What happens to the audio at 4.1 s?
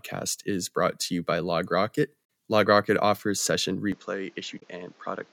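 At 3.92 s, after "offers session", the speech turns duller and quieter. Nothing above 7.6 kHz remains. New background noise appears. The input likely switched to a poorer device.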